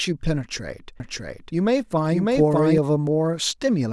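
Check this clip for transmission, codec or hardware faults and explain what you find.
There's one fault here, a doubled audio track running from 1.0 s to 2.78 s. Through that stretch a second full-band copy of the speech sits around 0.7 s behind the original, at roughly the same loudness, with no decay or room colour on it. It cuts in and out abruptly at both ends. The likely cause is the signal being picked up a second time through a slower path, or an edit leaving two copies out of step.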